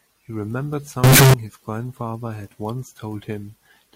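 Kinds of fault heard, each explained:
Float read as integer: from 1.04 to 1.34 s the speech becomes a very loud, harsh, nearly square wave at an almost fixed, high level, with background noise as loud as speech. Likely cause: 32-bit float samples read as 32-bit integers, letting sign and exponent bits set each value.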